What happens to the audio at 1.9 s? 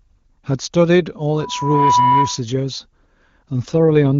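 At 1.9 s you're right in the middle of a loudspeaker feedback squeal that runs from about 1.33 to 2.42 s. The mic is hearing the speaker it drives, and at 985 Hz the loop gain tops one, so that tone keeps feeding itself. It swells over roughly half a second into a steady whistle sitting about 5 dB above the speech, then drops away when the loop is broken.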